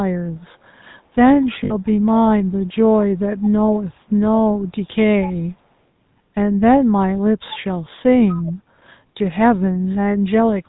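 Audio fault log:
Throughout: GSM full-rate codec. The whole clip has that gravelly, buzzy grain you get from the old full-rate coder, which fits its 13 kbps rate. The codec models the vocal tract and feeds it a sparse, regularly spaced pulse excitation, so the speech comes out rough rather than smooth. Nothing survives above 4 kHz, so the top end sounds clipped off and dull.
1.64 to 1.74 s: lost GSM frames. For about 60 ms, which fits three dropped 20 ms frames, the decoder had no good data and kept reusing the parameters from the last frame it trusted. That reuse is why the gap doesn't go silent. It smears into a short metallic ring that hangs on the preceding sound.
1.85 to 1.91 s: echo leak. A very faint copy of the speech, sitting far below the main signal, sneaks in about 208 ms late and lasts roughly 60 ms. That delay and the low-level scrap point to a likely cause: one side was on a loudspeaker, and its echo canceller let a bit of the returned audio slip back down the line.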